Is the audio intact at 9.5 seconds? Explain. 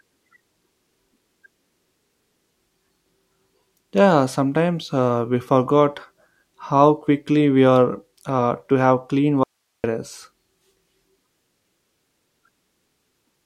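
No. An audio dropout to a faint residue runs from 9.44 to 9.84 s, right after "uh to have clean". The signal cuts off abruptly for about 0.4 s, leaving only hiss about 55 dB down, likely because the source was lost while the downstream path stayed live.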